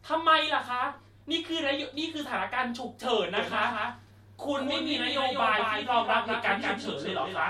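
Speech with a doubled audio track from 3.37 s to the end: a full-band copy trails by about a fifth of a second, roughly 5 dB quieter, likely from a second, slower capture path. Unlike an echo, it starts abruptly and has no decay or room colour.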